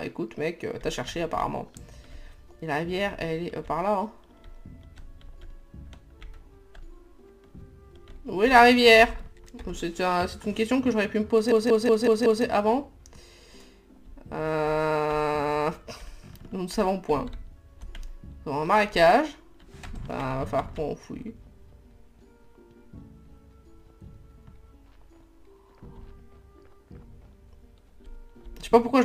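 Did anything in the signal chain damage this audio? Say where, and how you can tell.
Yes. From 11.52 to 12.45 s the sound stutters like a machine gun: one identical fragment of about 186 ms plays five times in a row, repeating at about 5.4 Hz, before normal playback resumes with essentially nothing missing. This is a system hang loop at the driver or buffer stage. The host or driver froze while the audio hardware kept replaying the same ring buffer, and a loop of that length fits an 8192-sample buffer.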